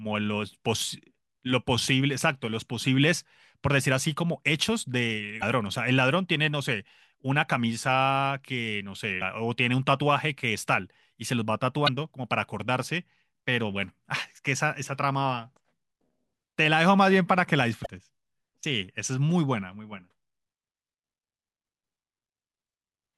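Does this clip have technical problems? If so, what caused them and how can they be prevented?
Yes. The speech has four short glitches from damaged data in a compressed stream, at 5.39–5.43, 9.18–9.22, 11.85–11.89 and 17.82–17.86 s. Corrupted bytes make the decoder misread those frames and lose sync briefly. Transferring files with checksums and a reliable transport would prevent this.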